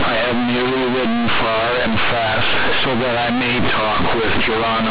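The speech is buried under harsh, overloaded buzz for its whole length, with loud noise filling the pauses. It's companded audio read as linear: mu-law G.711 bytes played back as plain 8-bit samples without expansion, so every sign change swings hugely and quiet passages blare.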